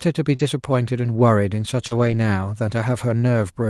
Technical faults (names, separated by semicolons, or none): short concealed packet loss; lost packet rebuilt from error correction